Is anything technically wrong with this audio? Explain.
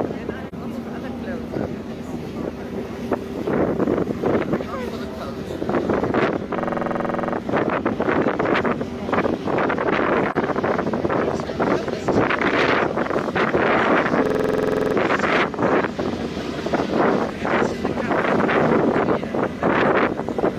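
Yes, there are two kinds of fault, each appearing twice.

At 0.48 to 0.54 s and 10.31 to 10.37 s there's AAC frame loss with muting. About 43 ms of audio, consistent with a single lost frame, had its spectrum zeroed by the decoder. The overlapping windows fade the sound out and back in, so you get a brief dip.

At 6.60 to 7.34 s and 14.26 to 14.95 s there's a system hang loop. The system stalled while the audio hardware kept replaying its ring buffer, so one 46.4 ms piece repeats 16 and then 15 times at 21.5 Hz, which fits a 2048-sample buffer. It comes across as a rapid machine-gun stutter.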